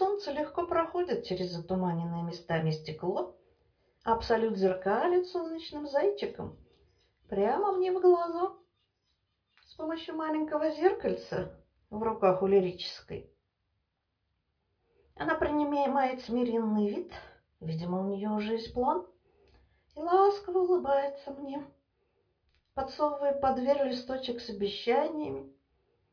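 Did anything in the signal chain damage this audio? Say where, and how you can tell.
No, nothing audible points to damage at any stage of the chain, so there is no stage to locate.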